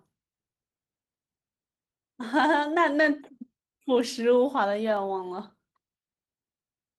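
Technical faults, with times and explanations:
2.29 s and 4.97 s, dropped samples: a few samples likely went missing, so the waveform jumps abruptly, heard each time as one sharp click.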